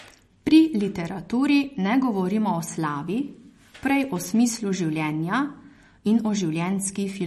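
From start to finish the speech has a watery, swirling texture, with s sounds turning metallic and chirpy and consonant onsets smeared, while the treble stops dead at 13.1 kHz. The likely cause is MP3 compression at a low bitrate, plainly audible damage consistent with roughly 40 kbps. Short of bits, the encoder cuts everything above a fixed frequency and drops weak frequency lines that then flicker in and out between frames.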